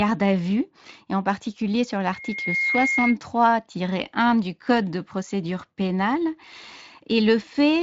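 A piercing single tone near 2.2 kHz swells up out of the speech at 2.12 s, climbing over roughly 0.4 seconds until it sits about as loud as the talker, then cuts off at 3.17 s. This is loudspeaker feedback squeal: the microphone is picking up the loudspeaker it feeds, and at that one frequency the loop gain exceeds unity, so the tone keeps reinforcing itself until the loop is broken. The Speex coding underneath adds only light roughness.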